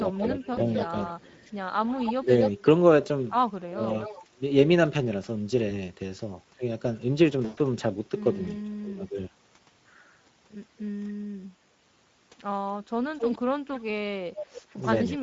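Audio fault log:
Throughout, Speex codec: at 16.8 kbps the CELP coder has a tight bit budget for the excitation, so the speech comes out noticeably hoarse and grainy, with a rough edge where the fine detail of the voice can't be fully coded.
0.13–2.5 s, 4.02–4.23 s, 13.16–15.21 s, echo leak: a delayed copy of the speech trails behind it by about 0.26 s, at about 10 dB, 15 dB and 5 dB below the direct speech respectively. This likely comes from a far-end loudspeaker whose echo canceller let part of the pickup slip back into the call.
0.35–0.94 s, 2.17–2.56 s, 3.65–3.83 s, 8.72–9.18 s, speech suppressed in double talk: the voice dips while the other side is talking, by about 5 dB in the first stretch, about 15 dB in the next two and about 20 dB in the last. This is likely the echo canceller clamping down because it couldn't separate the two talkers.
0.53–0.61 s, 5.69–5.73 s, 7.45–7.59 s, VoIP packet loss concealed by the speech codec: 40 ms, 20 ms and 120 ms of audio go missing, which fits a couple of 20 ms frames, one frame and about six frames. 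The decoder fills each gap by extrapolating from the last sound and fading it out. After the longest gap at 7.45 s the voice stays weak for a moment.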